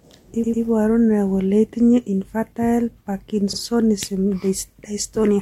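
At 0.42 s an 88.5 ms block of speech plays two extra times, and at 3.52 s a 45 ms block repeats once: repeated frames from duplicated compressed data. Unlike a dropout, nothing is lost; identical audio stutters, lengthening the speech.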